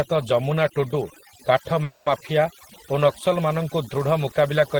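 Throughout the clip, overdone noise removal is at work. A noise reduction stage set far too aggressively pulls individual frequency bands down or out whenever they come close to its noise estimate, and it takes the softer parts of the speech along with the noise. The background falls to a near-silent floor dotted with small twinkling specks, and the voice has its quieter detail hollowed out.

From 1.83 s to 2.07 s there is a call audio freeze, most likely packets stalled in transit until the jitter buffer ran dry. To cover the gap, the receiver kept the last sound going for about 230 ms as a fading buzz or hiss rather than dropping to silence. When the delayed audio arrives, the speech resumes exactly where it stopped, with nothing lost. Everything after that point now runs about 230 ms later than it should.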